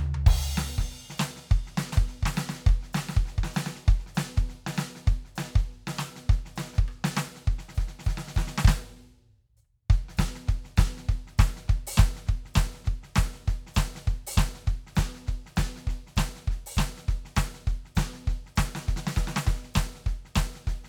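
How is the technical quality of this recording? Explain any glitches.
The recording has one clear glitch, a doubled audio track, from 1.92 to 4.06 s. During this span a second full-band copy of the music runs roughly 0.7 s behind the original, about 5 dB quieter. The copy has no decay or room colouring and cuts in and out abruptly at both edges. The likely cause is the same signal being captured a second time through a slower path and mixed back in, producing a smeared, out-of-step repeat.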